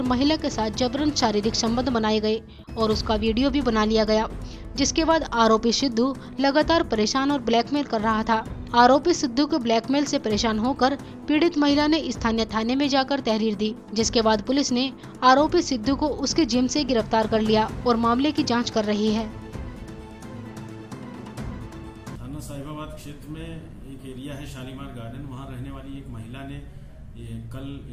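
No faults detected anywhere in the clip.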